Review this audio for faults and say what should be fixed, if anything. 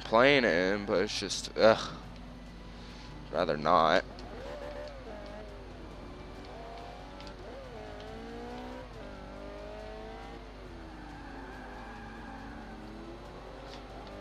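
Mains hum runs throughout the clip as a steady 50 Hz tone, roughly 15 dB below the wanted sound. It comes from a ground loop or a nearby transformer coupling the power line into the signal path. Prevent it by breaking the ground loop and routing cables away from transformers.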